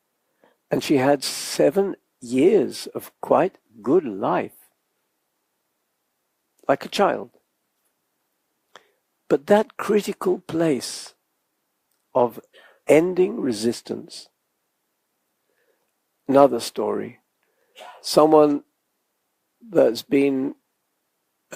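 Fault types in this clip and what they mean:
No technical faults are audible.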